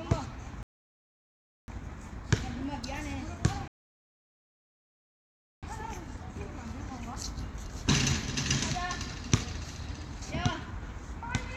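Rebuffering stalls at 0.63 to 1.68 s and 3.68 to 5.63 s: the player exhausted its downloaded audio and halted, so the sound drops to silence, then resumes exactly where it stopped. Nothing is skipped, but about 1.05 s and 1.95 s are added.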